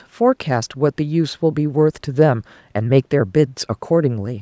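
Nothing's actually wrong with this bit of speech; it has simply been through a call's microphone processing, so the very lowest bass is trimmed off and nothing reaches above 8 kHz, which is just how that path normally sounds.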